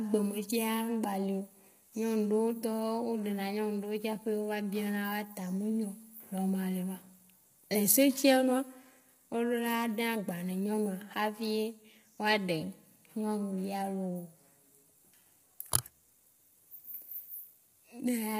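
Throughout the speech, the audio has likely passed through low-delay AAC compression of the AAC-ELD kind used on video calls, squeezed hard enough to fit about 24 kbps. Its short frames cannot separate the voice's pitch harmonics cleanly, so the damage is heavy: the speech sounds rough and grainy, with a hiss of noise filling the gaps between harmonics, and the top band turns thin and synthetic before stopping entirely at 15.6 kHz.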